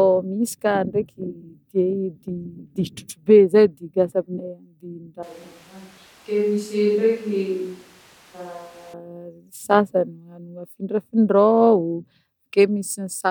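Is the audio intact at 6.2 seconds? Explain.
No. From 5.23 to 8.93 s the speech abruptly turns roomy and hollow, loses bass, drops by around 5 dB, and sits over room noise only about 30 dB below it. This is most likely a switch to a distant microphone, with the close mic's feed lost and a farther pickup carrying the sound. Added reverb would leave the bass, level and noise floor alone. Here all of them change together and snap back at the end.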